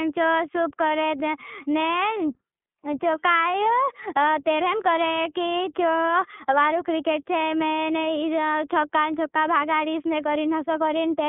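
From start to finish the speech carries plainly audible iLBC codec damage: thin, narrowband and slightly rough or synthetic, with each 20 ms frame coded independently, which fits a 15.2 kbps mode. A spectrogram shows a hard ceiling, with nothing above 3.7 kHz.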